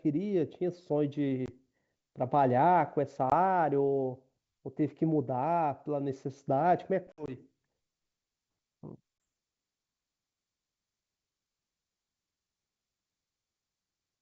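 Packet loss on an ADPCM call cuts this speech clip at 1.46–1.50 s, 3.30–3.33 s, 7.12–7.30 s and 9.24 s. Most are single hard-edged 20 ms silences, but near 7.1 s about 80 ms vanishes in scattered gaps. Each loss throws the decoder's predictor and step size out of step with the sender's, so speech returns slightly distorted.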